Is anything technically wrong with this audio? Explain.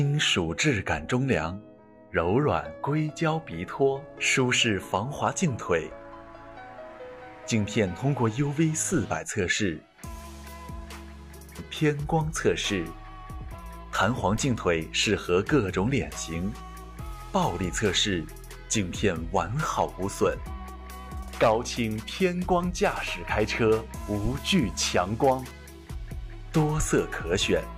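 Yes. At 12.24 s a handful of samples, well under a millisecond's worth, were likely dropped from the stream, so the waveform jumps abruptly to a later value. Nothing audible is lost, but the discontinuity produces a single sharp click, seen as a thin vertical line across the spectrum.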